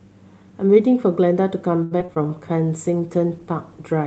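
From 1.83 to 2.29 s the speech turns choppy, with small pieces dropping out, the longest about 78 ms. This is repeated packet loss (robotic sound). Audio kept going missing in transit, and each hole was filled by stretching the previous sound, covering roughly a third of that stretch.

From 2.65 s to the end the voice grows rougher and more watery, with the top end thinner than the earlier 8 kHz call band. This points to a call bitrate drop, likely from about 40 to 15 kbps, forcing the Opus encoder into coarser coding for over a second.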